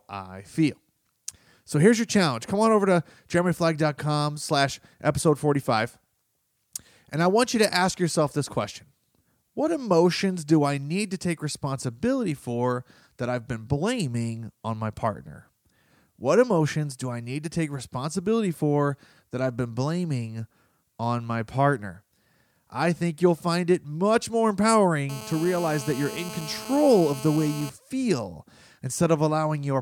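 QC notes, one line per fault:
25.09–27.70 s GSM phone buzz: a nearby 2G handset in a call pulses about 217 times a second, rectified into a raspy harmonic buzz about 14 dB below the speech.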